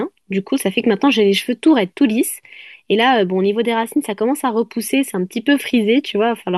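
No technical faults can be heard anywhere in this speech recording. Nothing in the signal calls for a time stamp or an explanation.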